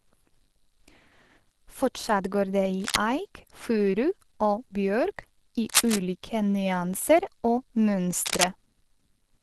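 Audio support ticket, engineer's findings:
Speech muffled and hoarse across the whole clip, consonants grainy and rough, upper band thin and smeared. Likely Opus compression at a low rate: sound consistent with a 16 kbps encode, encoder in its hybrid speech mode at super-wideband bandwidth, too few bits to carry band detail cleanly.

Short bursts of dense, uneven scratching and rustling, roughly as loud as the speech itself. Times 2.80–2.96 s, ending just before "eik furu"; 5.66–6.01 s; 8.22–8.46 s. Likely cable scratch noise from a worn cable, connector or control being moved, its contact resistance jumping rapidly and injecting noise into the signal.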